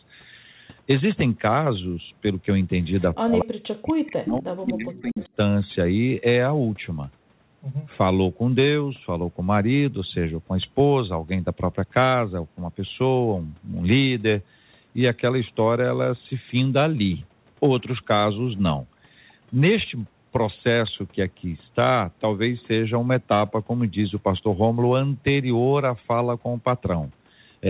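Speech heard through a telephone-band call path, with nothing above 4 kHz as a G.711 mu-law connection at 64 kbps would produce, shows two faults. Between 3.11 and 5.33 s the talker's level collapses in pieces, adding up to roughly two seconds of lost or sunken sound and dropping by as much as about 40 dB at the deepest point. This is speech suppressed in double talk, likely caused by an echo canceller that heard both ends talking at once and attenuated everything rather than risk passing echo. On a waveform the envelope pinches down to near-flat gaps. On a spectrogram the harmonic bands fade or vanish in blocks across that span. Inside the same stretch, two short bursts at 4.94–5.02 s and 5.20–5.27 s carry a faint delayed copy of the audio, trailing its source by 245 ms and sitting about 25 dB below the speech. That is echo leak, most plausibly residual loudspeaker pickup slipping past the canceller. 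It shows as weak, smeared energy echoing earlier spectral shapes, too low to stand out on the waveform.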